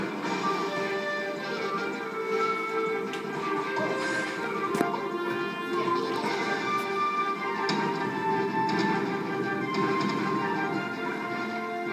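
No technical faults can be heard anywhere in the signal.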